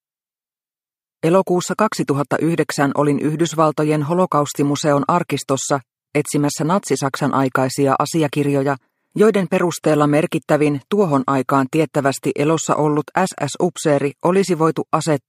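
No audible faults detected.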